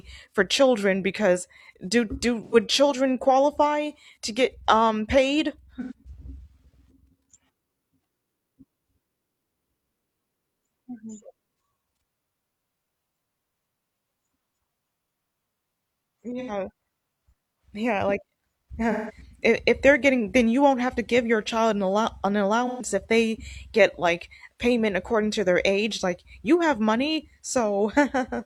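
AAC frame loss with concealment hits the speech five times: at 2.44 s, right after "children because do do"; at 5.81 s, after "to get um paid"; at 16.39 s; at 18.91 s; and at 22.66 s, just before "if they get like". Each gap lasts about 85 ms, except 171 ms at 18.91 s and 128 ms at 22.66 s, lengths that fit whole AAC frames. The decoder patches each gap from the last good spectrum, so it sounds smeared and phasey rather than silent or clicking, which sets it apart from a plain dropout.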